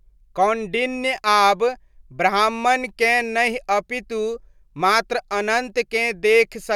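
No audible technical faults.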